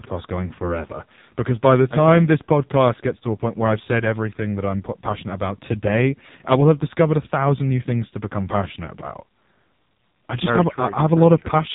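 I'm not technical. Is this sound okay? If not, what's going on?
No. Throughout the speech the voice sounds thin, buzzy and robotic, like a poor phone call, with nothing above about 3.8 kHz. This is the AMR narrowband mobile codec, the old mobile-phone format, squeezed hard so it rebuilds the voice from a rough model.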